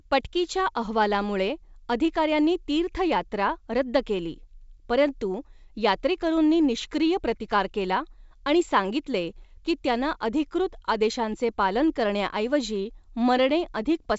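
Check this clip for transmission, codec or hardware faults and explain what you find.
Nothing here points to a transmission, codec or hardware fault; the speech comes through the usual G.722 wideband telephone path at 64 kbit/s, so the top end simply stops at about 7.7 kHz, and that's as it should be.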